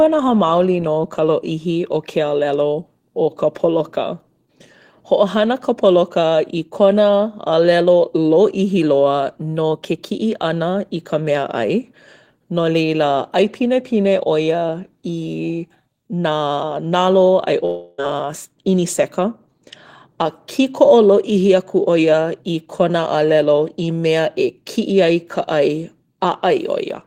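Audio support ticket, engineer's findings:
Speech breaks at 17.65 s into a buzzy continuation of the last sound that fades over about 0.33 s, with no true silence. Audio resumes at 18.0 s with roughly 0.32 s of speech missing, not delayed. Long network dropout, likely a burst of lost packets on the receive path. The decoder's loss concealment stretched the last received audio to fill the gap, and playback jumped past the lost segment instead of catching up.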